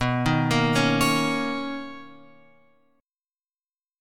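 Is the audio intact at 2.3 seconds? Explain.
Yes, at 2.3 seconds the audio is intact, with no dropout, click, distortion or other fault at that point.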